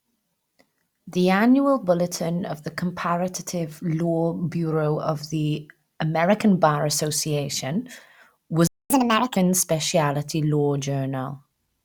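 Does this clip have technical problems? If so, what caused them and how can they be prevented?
Yes. There is a playback stall: the player most likely ran short of buffered data, or its output thread was blocked, so the speech cuts to silence from 8.67 to 8.90 s, a gap of about 230 ms, before resuming. A larger playback buffer and keeping the audio thread free of blocking work would prevent this.

Catch-up at higher speed follows: to recover the lost time, the player resamples its backlog at 1.5 times normal speed from 8.90 to 9.36 s, so the speech sounds hurried and about seven semitones higher before settling back. Letting the player absorb the delay with a gentle, inaudible rate change, or skip the backlog instead, would avoid this.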